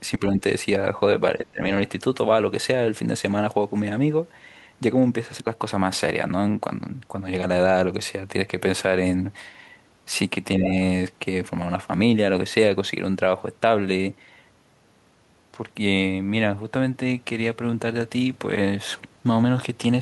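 Speech, with the level dipping in three places: from 0.18 to 0.36 s by about 15 dB in short bites, from 1.38 to 1.7 s by about 20 dB for most of that stretch, and from 10.59 to 10.7 s by a slight few dB. This is likely speech suppressed in double talk, the echo canceller mistaking overlapping far-end sound for echo and turning the talker down too. On a waveform the envelope pinches inward; a spectrogram shows the bands fading.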